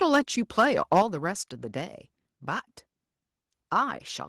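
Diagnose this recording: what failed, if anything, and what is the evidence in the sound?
Two bursts of harsh, crackling distortion land on the loudest syllables, at 0.59 to 0.65 s and 0.92 to 1.02 s. The likely cause is microphone overload at the converter stage: the input drove peaks about 3 dB and about 4 dB past full scale, so roughly 7 percent of samples in each burst are clipped. On a waveform those peaks appear as flat-topped plateaus. A spectrogram shows brief vertical smears of added upper harmonics.

At 1.02 s, right after the second distorted peak, the whole signal, including the background, drops by about 4 dB in a single step. This points to the microphone volume being stepped down, likely by call processing that detected the clipping and lowered the device's input gain at once. On the waveform the envelope and noise floor fall together to a new, steady level. On a spectrogram every band dims simultaneously at that instant.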